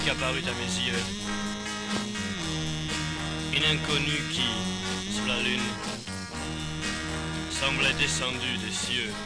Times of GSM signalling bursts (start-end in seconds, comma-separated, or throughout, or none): none